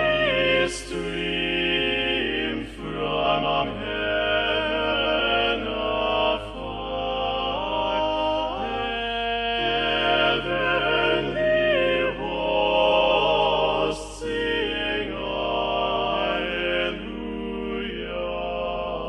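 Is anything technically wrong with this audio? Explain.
Yes, there are frames out of order at 3.23–3.64, 4.90–5.21, 12.89–13.09 and 18.65–18.86 s. In each, two adjacent runs of roughly 186, 139, 93 and 93 ms were decoded swapped, giving a garbled flutter. Unlike a dropout or stutter, no time is lost or repeated.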